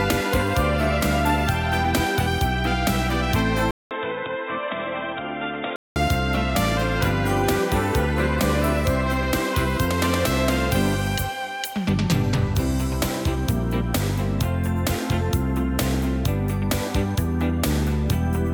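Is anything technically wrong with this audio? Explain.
Yes. From 3.71 to 5.96 s the sound turns dull and boxy, with nothing above 3.8 kHz, a level drop of around 10 dB, and a new background noise sitting roughly 55 dB down. A 0.2 s silence precedes the change. The likely cause is an input switched to a poorer device, a different microphone or headset profile with a narrower band. A simple filter or codec bandwidth drop would not change the level and noise floor together or leave a gap at the switch.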